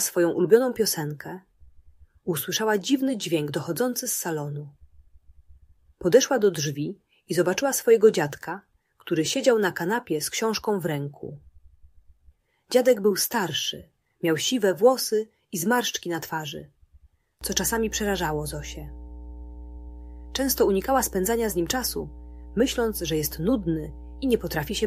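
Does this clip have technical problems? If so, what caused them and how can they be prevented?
Yes. Mains hum enters at 17.41 s and runs to the end at 24.86 s: a steady 60 Hz tone, roughly 15 dB below the signal, from a ground loop or nearby transformer. A spectrogram shows a flat line at 60 Hz with low harmonics above it. Breaking ground loops and routing cables away from power supplies prevents it.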